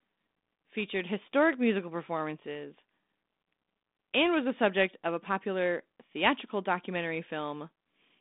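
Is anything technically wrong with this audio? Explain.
No, the speech carries no technical fault, and it sounds as expected for a G.726 ADPCM path at 32 kbit/s, with the telephone band running from about 200 Hz to 3.7 kHz and nothing above 3.8 kHz.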